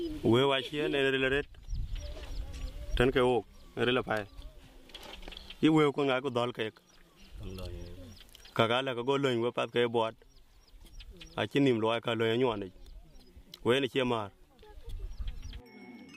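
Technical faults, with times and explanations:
Nothing stood out on listening to this recording.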